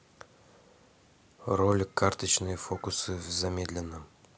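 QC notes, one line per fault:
No faults found in this speech clip on listening.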